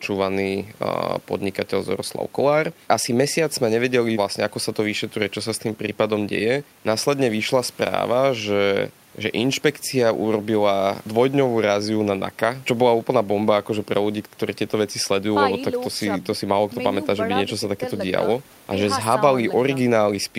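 No technical faults can be heard anywhere in the recording.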